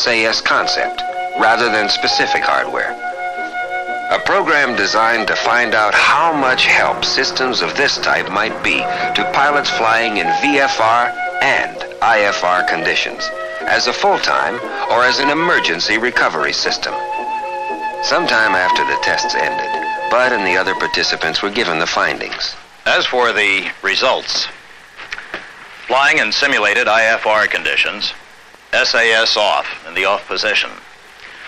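No technical faults can be heard anywhere in this recording.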